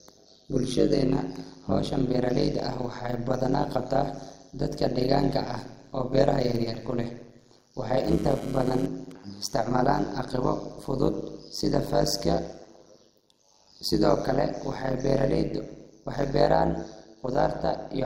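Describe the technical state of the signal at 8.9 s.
At 8.9 s the speech carries overlap-add ripple: windowed frames were rejoined with an overlap that doesn't sum to constant gain, so level pumps around 100 Hz, up to about 60 dB deep. It sounds like a metallic buzz with extra tones around each note, and on a waveform the envelope appears as evenly spaced, deeply scalloped notches.

A GSM phone buzz also runs from 8.08 to 9.12 s, ending just before "isticmaalan aqibo fudud sida". The circuit rectifies a nearby handset's data bursts at about 217 Hz, about 16 dB below the speech, producing a raspy, intermittent buzz. A spectrogram shows a comb of harmonics at multiples of 217 Hz.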